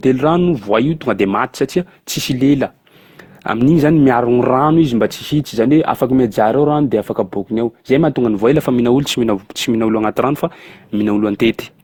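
Throughout the speech, a swirly, hollow smear and blurred attacks point to generation loss, likely from about seven Opus passes near 64 kbit/s, far worse than one encode would leave.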